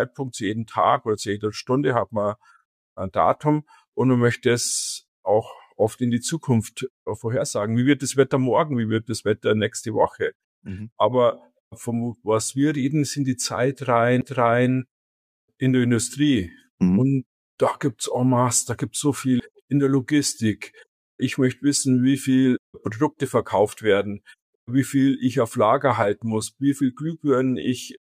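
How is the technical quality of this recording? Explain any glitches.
The recording has two glitches, both CD skips. At 14.21 s and 19.40 s, the laser jumps tracks. A brief mute of roughly 10 ms and 7 ms respectively follows, then the sound resumes elsewhere.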